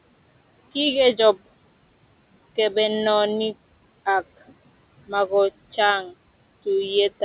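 Throughout the clip a noise suppressor cuts the bands it reads as steady room noise by about 20 dB. That noise sits about 19 dB below the speech, and the noise sinks in pauses and returns under the speech.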